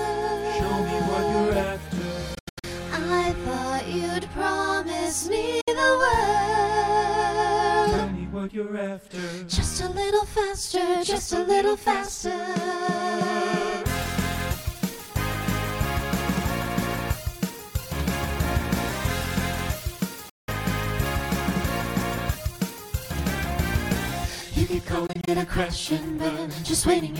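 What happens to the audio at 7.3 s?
Nothing goes wrong at 7.3 s; the audio runs through that moment intact, with no dropout, click or other disturbance.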